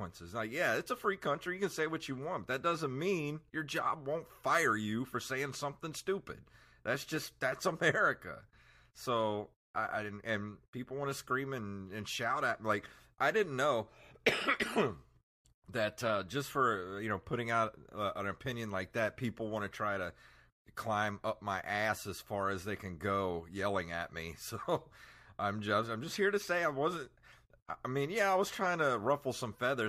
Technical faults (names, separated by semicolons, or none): none